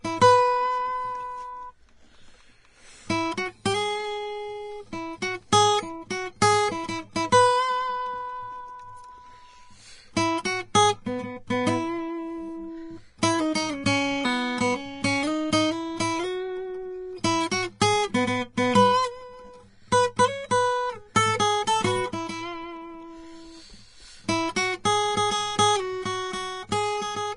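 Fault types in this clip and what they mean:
Vorbis compression: The music is likely coded with Vorbis at a low quality setting, which fits a bitrate near 30 kbps. Nothing remains above 10.6 kHz. The treble is quantised so coarsely that fine detail turns into plainly audible hiss and grain. Tones sound rough.
Pre-echo: At 13.22 s and 17.81 s, a sharp attack falls late in a coding block. Noise sized for the loud onset spreads back into the quiet just before it. A brief hiss of 10 ms and 11 ms leads each attack, which sounds smeared.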